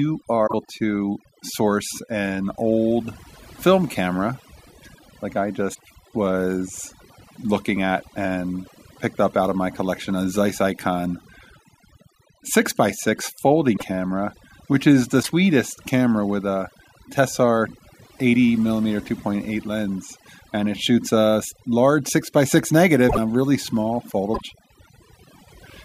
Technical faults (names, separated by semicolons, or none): overdone noise removal; broken MP3 bit reservoir